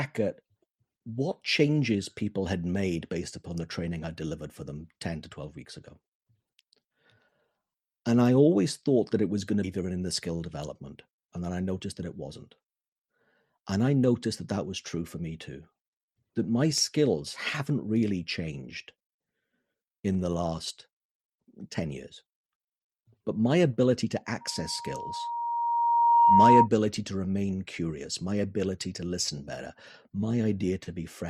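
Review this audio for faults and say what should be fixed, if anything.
At 9.63 to 9.65 s, right after "it was going to", there is a skip ahead. About 0.7 s of audio is missing, and the two sides are spliced with no gap because audio was dropped, either on the way or by the jitter buffer when it overflowed. Limit maximum buffer depth and conceal late packets gradually rather than flushing them.

From 9.83 to 10.48 s there is a jitter buffer speed-up. Playback runs at 109% with unchanged pitch as the receiver trims pitch-period segments, roughly 70 ms in total, to shrink excess buffered delay. Spread delay reduction over longer spans so the acceleration stays inaudible.

From 24.41 to 26.68 s, between "my ability to" and "to remain curious my", there is a loudspeaker feedback squeal. A 941 Hz tone swells over roughly two seconds to about 10 dB above the speech because the microphone-loudspeaker loop exceeds unity gain there. 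Add acoustic echo cancellation or a feedback suppressor, and reduce loop gain.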